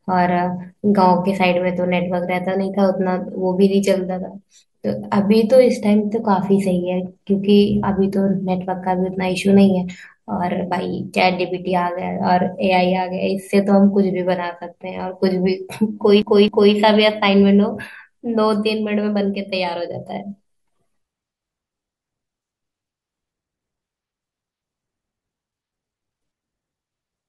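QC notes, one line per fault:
16.22 to 16.74 s, CD stuck on one turn: a 263 ms slice of speech plays twice, muted briefly at each jump, as the laser skips back one track.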